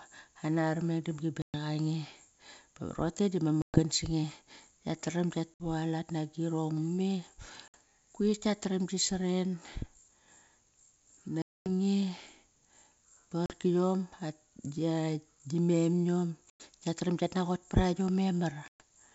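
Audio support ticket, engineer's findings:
Packet loss on an ADPCM call: bursts of lost packets filled with silence; the decoder's predictor and step size drift from the sender's. Hard-edged dropouts at 1.42, 3.62, 5.54, 7.68, 11.42, 13.46, 16.50 and 18.68 s, 40 to 240 ms each, the longest at 11.42 s. Speech returns slightly distorted, settling within tens of milliseconds, e.g. after "bar rote du" and at "nagirong me". Gap lengths suggest several packets per burst. G.722 wideband path clean.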